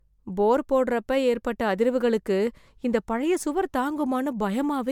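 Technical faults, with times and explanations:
Throughout, generation loss: the speech sounds swirly, smeared and hollow, with blurred attacks, despite content reaching 20.1 kHz. Likely cause: around three passes through a lossy coder, consistent with 128 kbit/s MP3, each requantising on a shifted frame grid so noise and spectral holes pile up.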